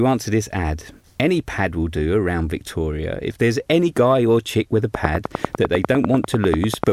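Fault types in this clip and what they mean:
Train of clicks: a run of near-identical pulses, likely from interference or a faulty connection, ticking steadily at about 10 per second after "or chick with a", around twenty clicks standing about 20 dB above the speech; their regular spacing and repeated shape set them apart from random crackle.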